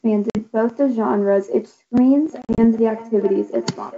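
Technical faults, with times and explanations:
0.30–0.40 s, packet loss on an ADPCM call: about 50 ms of audio, roughly five packets' worth, drops to hard silence, and the decoder's mismatched predictor brings speech back slightly distorted.
2.42–2.65 s, packet loss on an ADPCM call: 100 ms goes missing in scattered gaps over 160 ms, the longest 40 ms, and the desynchronised decoder leaves the returning speech slightly distorted.
2.3 s to the end, feedback echo between two devices: a second device replays this microphone's signal back into it, so speech returns roughly every 0.4 s, thinner and ringing, at about 18 dB below the direct sound.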